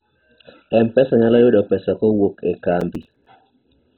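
From start to finish the speech is dull, with nothing above 4 kHz and a gurgling, granular grain, the likely result of heavy MP2 compression at a very low bitrate starving the sub-bands. The upper bands are removed outright rather than rolled off smoothly, unlike a plain low-pass filter.

From 2.81 to 3.26 s a processor overload crackle tears through the speech. A string of roughly ten buffers, each about 5 ms, missed their deadlines and were filled with silence, leaving rapid hard-edged gaps. It comes as a burst that stops, unlike a steady codec grain.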